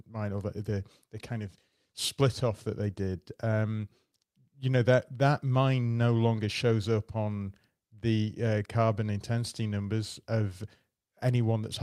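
No technical faults can be heard in this speech recording.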